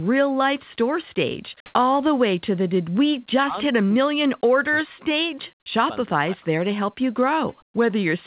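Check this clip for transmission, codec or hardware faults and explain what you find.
Three kinds of fault turn up in this speech clip: a brief comfort-noise patch, several stretches of double-talk suppression, and a short echo leak. The audio is band-limited to about 4 kHz, which points to a narrowband telephone codec such as G.711.

Comfort noise in place of the background, 1.66 to 1.74 s: The sender likely stopped transmitting during a pause in speech, and the receiver filled the gap with synthetic noise. For those 80 ms the real background, already about 64 dB below the loud passages, is replaced by a flat, featureless hiss whose level differs by about 44 dB from what surrounds it. That produces a short, abrupt shift in the room sound.

Speech suppressed in double talk, 3.41 to 5.06 s, 5.43 to 5.91 s and 6.07 to 6.47 s: With both ends talking at once, the echo canceller likely could not separate this talker from the loudspeaker echo and pulled the whole signal down. 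The speech sinks by as much as roughly 40 dB, thinning and dropping out in pieces. The first stretch affects around a second and a half, and the two later ones a few tenths of a second each.

Echo leak, 7.5 to 7.56 s: A loudspeaker at the far end likely let some of this talker's voice back into its microphone, and the echo canceller did not fully remove it. The result is a faint copy of the speech arriving 397 ms late, roughly 35 dB below the direct voice. It lasts only a fragment, heard as a ghostly scrap trailing behind the talker.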